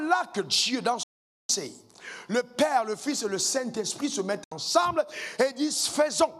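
At 1.03 s the audio drops out abruptly for about 0.46 s, returning at 1.50 s. A second, shorter hole follows at 4.44 s, lasting 72 ms. Both are digital broadcast dropouts: the receiver lost valid frames and muted until good ones arrived, so that stretch of programme is gone. Each gap is a near-instant 3 ms fade to silence. The waveform shows flat silent gaps, and the spectrogram shows clean vertical blank bands.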